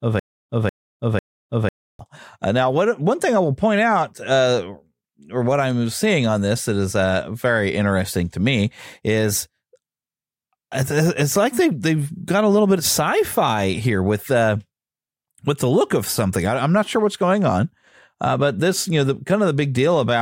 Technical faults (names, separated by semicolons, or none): stutter with silent gaps